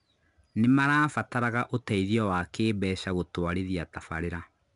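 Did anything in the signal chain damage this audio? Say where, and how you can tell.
Yes, at the codec stage: 4-bit ADPCM compression runs through the whole speech clip. Every loud passage carries a gritty hiss that rises and falls with the level. Sharp attacks sound roughened. Each sample is coded as a small 4-bit step from a prediction, and the step size adapts too slowly for fast transients. Nothing is present above 10.6 kHz, which points to a sample rate near 22 kHz and a stream of about 89 kbps.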